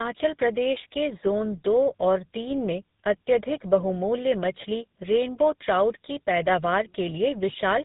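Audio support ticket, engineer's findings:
Tandem speech coding, whole clip. Speech rough, muffled, warbly; nothing above 3.8 kHz. Two lossy speech codecs in series, each re-encoding the other's artefacts. Character points to AMR-NB around 10.2 kbit/s, then GSM full rate 13 kbit/s, bridged via G.711 A-law. Transcoding at network borders.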